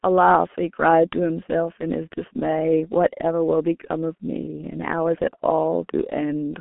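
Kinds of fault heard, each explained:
G.723.1 codec: a low-rate telephony codec, here around 6.3 kbit/s, that rebuilds speech from a coarse, slowly updated model in 30 ms frames, leaving muffled, hoarse speech with smeared consonants. A spectrogram shows energy confined to roughly 200 Hz to 3.4 kHz, empty above 3.8 kHz.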